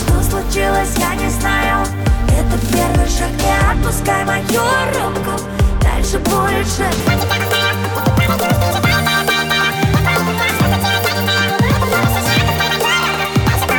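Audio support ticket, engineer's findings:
Audio read two samples at a time (double speed), 7.0 s to end. Runs 2x, pitch up exactly 12 semitones. Reader taking sample pairs as one frame, assuming stereo or double-width samples. Abrupt switch and exact octave rule out clock drift.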